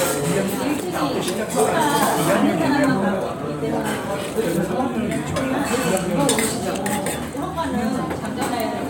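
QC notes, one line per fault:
No faults found on this clip of sounds; nothing to log.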